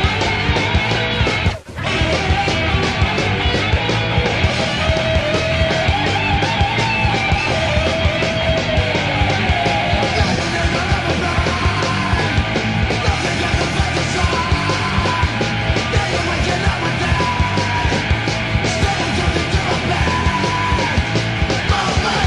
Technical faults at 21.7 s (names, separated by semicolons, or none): none